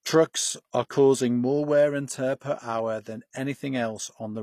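From start to finish the speech carries plainly audible HE-AAC compression damage, likely from a low-rate encode around 24 kbps. Nothing sits above 15 kHz, and the rebuilt treble does not line up harmonically with the coded band, so s sounds come out gritty and metallic.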